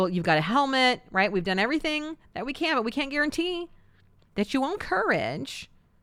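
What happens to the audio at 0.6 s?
Nothing goes wrong at 0.6 s; the speech runs on intact through that moment.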